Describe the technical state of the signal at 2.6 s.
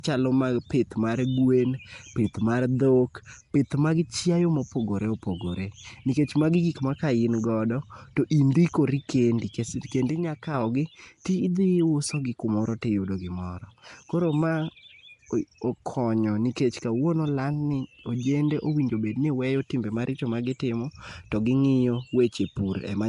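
At 2.6 s the speech has a rough, hissy halo and a smeared, underwater quality, with nothing above 10.6 kHz, as it does for the whole clip. The likely cause is Nellymoser compression, which codes short blocks coarsely and fills starved bands with noise; the damage fits roughly 44 kbps.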